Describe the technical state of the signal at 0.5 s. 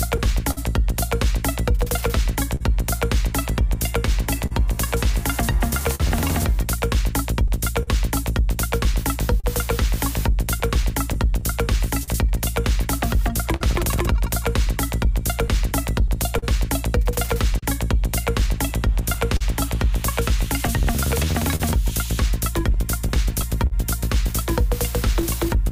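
At 0.5 s the signal is inside a short stall from a late packet, running from 0.51 to 0.59 s. The jitter buffer ran empty, so the receiver held the last sound for 58 ms until the packet arrived. Nothing is lost, but the sound hangs briefly with a slight buzz or dip.

The moment also falls within repeated timing corrections spanning 0.27 to 25.58 s. The receiver keeps inserting small repeated pieces, slowing playback to 99 percent speed and adding roughly 150 ms overall. Each edit is small, all in the same direction but unevenly spaced.

Behind both is clock drift between sender and receiver, present throughout. The sender's clock runs a few percent slow, so the buffer keeps draining. That drift drives the repeat-style corrections.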